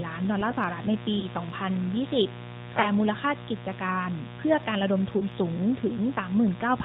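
From start to finish, a dimmer, rectifier or missing shield lets sharp switching spikes onto the line twice in each 60 Hz mains cycle. Their harmonics climb into the kilohertz range, so the mains buzz sits as a steady, raspy drone under the speech, only about 10 dB below it.

The whole recording has also passed through the AMR narrowband mobile codec. The signal was resampled to 8 kHz, and the speech was rebuilt from a vocal-tract model excited by a handful of pulses in each 5 ms sub-block. The result is hard band-limiting with nothing above 4 kHz, and the codec damage is plainly audible as a buzzy, somewhat synthetic voice, consistent with a mid-rate mode around 10.2 kbps. The codec also garbles the mains buzz into a wavering, swirling texture.

Three lost AMR speech frames follow. In each, a radio error corrupted a single 20 ms frame, and the decoder covered the gap by repeating the previous pitch and vocal-tract settings at lowered gain. 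The first falls at 1.20 to 1.25 s, the second at 2.82 to 2.86 s, and the third at 5.18 to 5.25 s. Each is a brief dip or warble, and the voice returns a touch weak or rough for an instant before settling.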